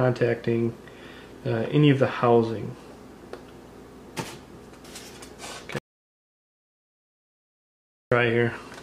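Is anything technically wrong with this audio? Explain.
Yes. From 5.78 to 8.12 s there's an audio dropout to silence: about 2.33 s of dead silence, likely from the input briefly disconnecting while recording continued.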